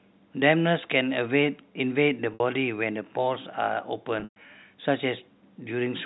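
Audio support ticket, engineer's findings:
Packet loss with pitch repetition, 2.34 to 2.40 s: brief held, buzzy tone where 60 ms of audio is missing, which fits three 20 ms packets. Receiver concealment repeats the last pitch period to bridge the gap.

Packet loss with pitch repetition, 4.20 to 4.36 s: 140 ms lost across 160 ms, longest run 120 ms. Repeated pitch period fades out about 50 ms in, leaving silence, then a short cross-fade back into the speech. G.711 A-law path shows the expected 4 kHz band limit.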